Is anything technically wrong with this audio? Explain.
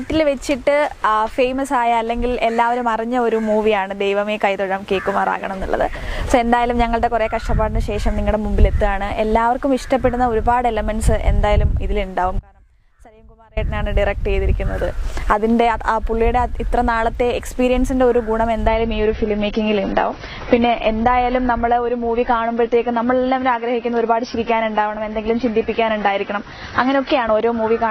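Yes, there are two faults.

From 12.39 to 13.57 s there is an audio dropout to a faint residue. The sound cuts out abruptly for about 1.2 s. Only a faint leak remains, roughly 30 dB down. The likely cause is a brief loss of the wanted signal while the path stayed live.

From 18.67 s to the end, the adaptive stream switches to a lower bitrate. Quality drops suddenly, with no gap. Nothing remains above 6.4 kHz, and codec artefacts rise. This points to a fall from about 96 to 24 kbit/s AAC.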